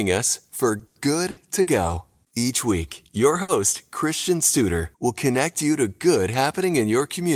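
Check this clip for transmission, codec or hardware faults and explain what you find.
There are two transmission faults here, both from network packet loss, with no codec or hardware problems showing up.

From 0.79 to 1.70 s there's repeated packet loss, the choppy, robotic kind. Packets kept going missing or arriving late, and each time the receiver covered the hole by carrying the last bit of sound forward. That happens four times in under a second, with the longest gap at 90 ms. About 220 ms gets patched over, roughly a quarter of that stretch, and about 120 ms of real audio is simply gone. So you hear the speech break up into choppy, stitched-together fragments with pieces missing.

Then at 3.42 to 3.51 s there's a single burst of packet loss. A run of packets failed to arrive in time, leaving a 60 ms hole. The receiver filled it by extending the last sound and fading it down as the gap went on, so it comes out as either a held buzz or a dying hiss, depending on what was playing just before. 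When the audio picks up again, about 60 ms of the original has been skipped, so there's a small jump forward.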